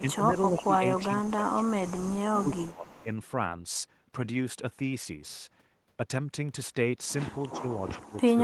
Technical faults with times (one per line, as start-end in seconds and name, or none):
0.01-0.31 speech suppressed in double talk
0.64-1.95 speech suppressed in double talk
2.34-3.05 speech suppressed in double talk
2.68-3.03 echo leak